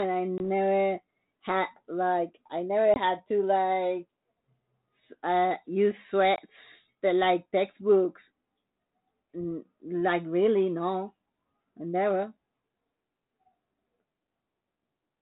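Speech carried over G.726 ADPCM, its sound consistent with 32 kbit/s, suffers packet loss on an ADPCM call at 0.38, 2.94 and 6.36 s. Each time about 20 ms, roughly one packet, drops to silence, and the decoder's predictor loses step, so the sound returns with brief distortion.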